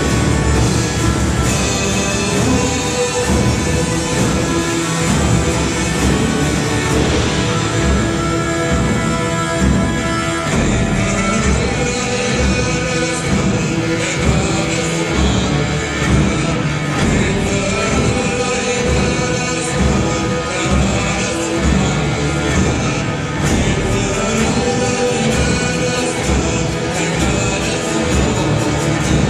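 Nothing stood out as a technical problem on listening through this recording.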